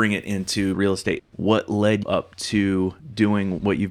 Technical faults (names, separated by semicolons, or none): de-emphasis applied wrongly